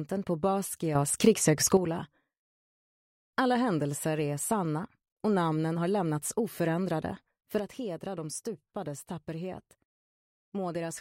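At 0.95 s everything steps up by about 8 dB in an instant, with the sound and the background noise rising together. It holds there until 1.77 s, then drops straight back. At 7.59 s the level falls by about 7 dB in one go and stays down to the end. Both are sudden gain jumps, likely a gain change applied from one sample to the next without any ramp.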